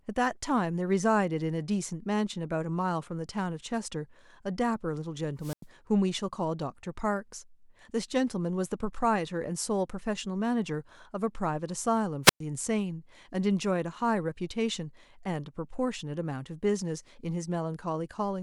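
A wireless microphone squelch dropout occurs in this speech clip at 5.40 to 5.66 s and again at 12.23 to 12.40 s. Each time, hiss swells as the radio signal fades, then the receiver's squelch mutes the output for 94 ms and 111 ms respectively before the speech returns.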